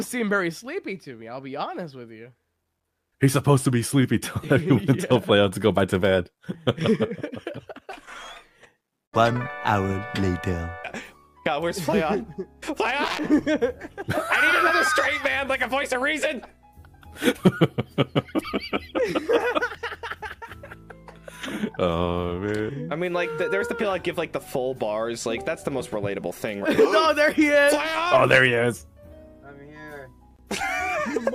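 A small jump forward in the sound at 15.71 s and 30.31 s, likely dropped buffers (overruns) that each skip about a millisecond or two.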